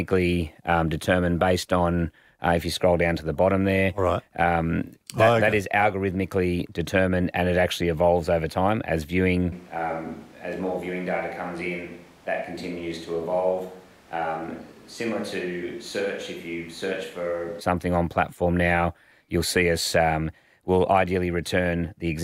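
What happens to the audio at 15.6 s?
At 15.6 s you're in the middle of what sounds like a switch to a distant microphone, running from 9.52 s to 17.61 s. The speech suddenly goes roomy and hollow, loses its low end, and drops a few decibels in level, with the room noise creeping up to only about 25 dB below the voice. The cause is likely the close mic's signal dropping out, leaving a farther-off pickup carrying the sound until it snaps back at 17.61 s.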